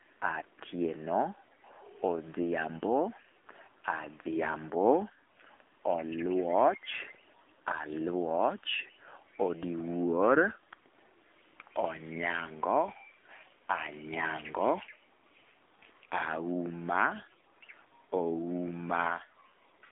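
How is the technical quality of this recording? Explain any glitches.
The recording is narrowband phone-quality speech with plainly audible codec damage throughout. AMR narrowband mobile codec, whole clip: the line passes roughly 250 Hz to 3.6 kHz, with nothing above 3.7 kHz. The vocal-tract model rebuilds speech from few bits, which fits a low mode near 7.4 kbps, giving a buzzy, synthetic, muffled voice.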